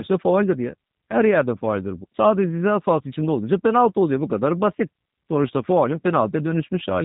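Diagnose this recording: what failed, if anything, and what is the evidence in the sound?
The speech sounds plainly rough and slightly synthetic from start to finish, and nothing is heard above about 4 kHz. This is G.729 codec damage at the codec stage, at a level that fits an 8 kbit/s coder. It does not send the waveform itself. It sends a vocal tract filter, a pitch predictor and a few pulses per frame, and the decoder resynthesises speech from those, which produces the rough, artificial quality.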